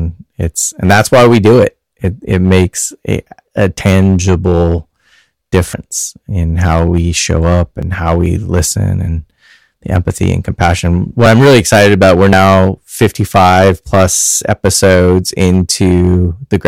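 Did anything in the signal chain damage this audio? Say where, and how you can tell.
Yes, two things. The whole clip has hard clipping: it's driven about 14 dB past full scale, so around one sample in twenty is sheared flat. That puts a harsh, fuzzy edge on every louder syllable. It's most likely an overdriven gain stage feeding the converter.

There are also small jumps at 3.81 s (after "it makes a a"), 5.74 s (before "in how we show"), 7.83 s, 11.26 s (between "the empathy and compassion" and "I'm really excited about"), and 12.33 s. Each skips roughly 20 to 70 ms with no gap, likely dropped buffers from a driver overrun.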